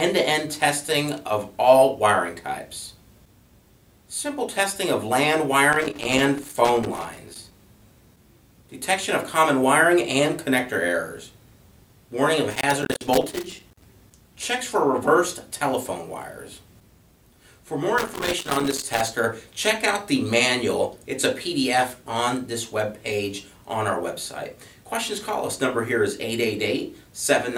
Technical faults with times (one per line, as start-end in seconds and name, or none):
5.73-7.53 loose connector crackle
12.51-13.85 loose connector crackle
17.98-19.08 loose connector crackle